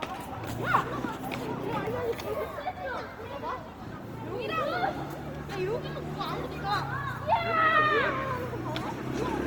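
From start to finish the sound has a grainy, rough texture, with tonal parts smeared into noise instead of swirling. That's likely Opus compression in its CELT music mode, filling starved bands with folded or noise energy, which fits a low rate around 24 kbps, though content still reaches about 20.1 kHz.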